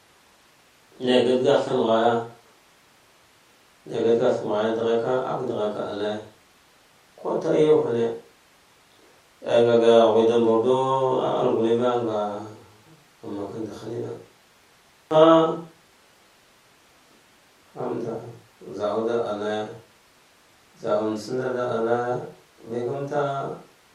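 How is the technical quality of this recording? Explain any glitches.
The recording's technical quality is sound, with no glitches or transmission faults to report anywhere in the signal.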